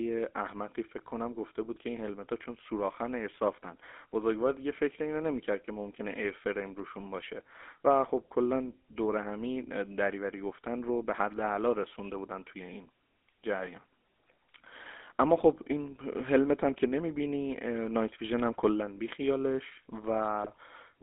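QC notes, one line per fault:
Throughout: GSM full-rate codec. The speech has a buzzy, gravelly roughness with audible codec damage. The coder rebuilds the voice from a vocal-tract filter driven by a coarse, regularly spaced pulse excitation, so fine detail is lost. The band sits at about 250 Hz to 3.6 kHz, cutting both the low body and the upper presence. The grain points to a 13 kbps full-rate stream.
20.44–20.56 s: GSM bit errors. For about 120 ms near the end of the clip, the speech breaks into a short squawk and gargle. Corrupted bits reaching the decoder throw off the filter, pitch or gain values, which bends the spectrum and jolts the level from frame to frame. The length of the burst fits a handful of consecutive 20 ms frames being hit.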